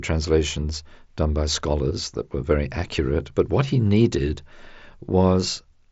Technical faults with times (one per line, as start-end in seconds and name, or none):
none